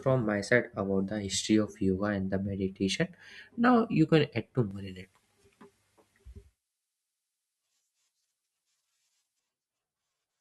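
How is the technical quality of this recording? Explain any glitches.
There's one real problem in this speech recording: from 4.71 s to 9.39 s, pre-emphasis is left on. Somewhere in the chain the treble got boosted for recording or transmission and the matching de-emphasis never happened, so the highs stay lifted, about 11 dB at 10 kHz compared with 1 kHz. The tilt fits a J.17-style curve. Through that stretch the speech turns thin and bright, with the sibilants spitting out harshly.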